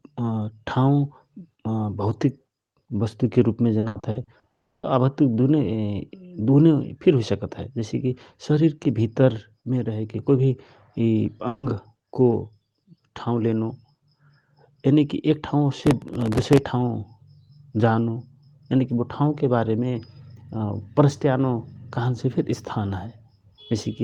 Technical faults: repeated packet loss (robotic sound); long network dropout; processor overload crackle

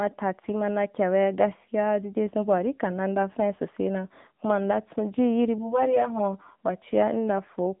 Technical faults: AMR narrowband mobile codec; channel delay (comb filtering)

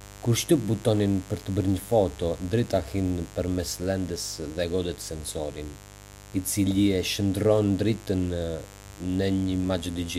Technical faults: mains buzz

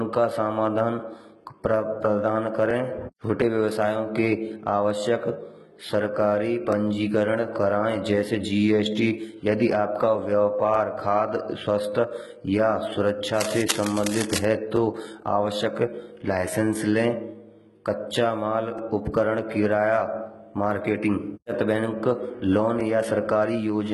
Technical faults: HE-AAC compression; overlapping chunks; cable scratch noise

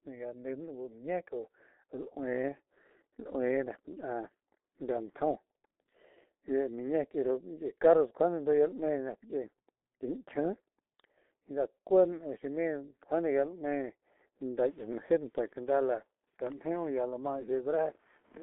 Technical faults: G.723.1 codec

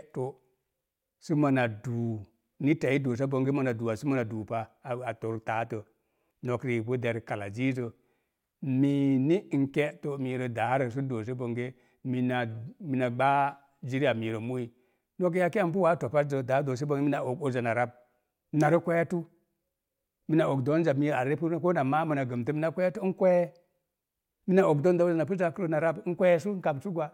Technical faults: none

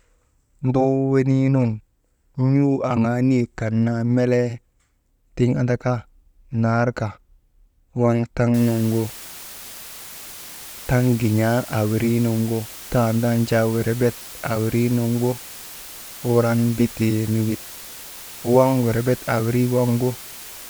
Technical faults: low bit depth with dither

